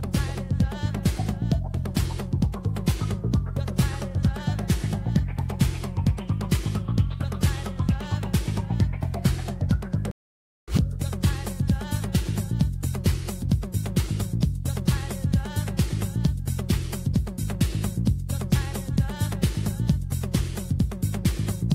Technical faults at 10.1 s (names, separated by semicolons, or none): stream reconnect